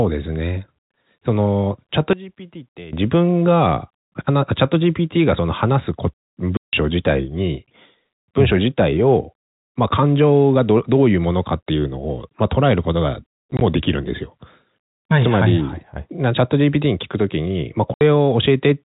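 One channel inverted, from 2.13 to 2.93 s, is the likely cause of the sudden drop of about 18 dB in this speech recording. With one side's polarity flipped, everything common to both channels cancels when they are summed to mono, so the centred voice nearly disappears and only a faint residue of the channel difference remains until the level returns. Packet loss filled with silence cuts three holes into the audio. The first is a single 160 ms gap at 6.57 to 6.73 s. The second scatters 40 ms of dropouts across 13.51 to 13.61 s, none longer than 20 ms. The last is a 70 ms gap at 17.94 to 18.01 s. All the gap lengths fall on multiples of 10 ms, which fits 10 ms packets that never arrived and were replaced with digital silence. Each hole starts and stops abruptly.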